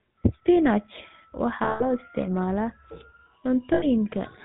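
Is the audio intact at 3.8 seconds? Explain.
No. From 3.74 to 3.86 s the sound turns into a rough, metallic ring that hangs instead of moving on. These are lost GSM frames: the decoder kept repeating the last good frame's settings, which fits about 80 ms of missing data, roughly four frames.

Around that moment the audio also has the buzzy, gravelly roughness of the GSM full-rate codec, with nothing above 4 kHz. The codec drives a vocal-tract model with sparse, regularly spaced pulses, and the plainly audible damage fits its 13 kbps rate.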